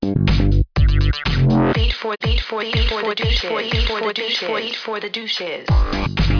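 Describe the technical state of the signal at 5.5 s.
At 5.5 s the signal is intact, with no technical fault present at that moment.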